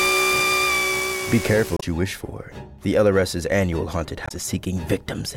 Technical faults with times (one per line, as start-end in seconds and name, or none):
1.76-1.83 damaged data in a compressed stream
4.25-4.32 damaged data in a compressed stream